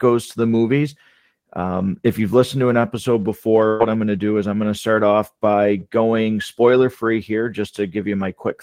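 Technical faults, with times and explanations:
3.67–3.82 s, burst of packet loss: the speech smears into a brief held sound that fades, then jumps ahead. A run of packets was lost or came too late, so the receiver stretched the last sound over about 120 ms and faded it, and that stretch of speech is missing.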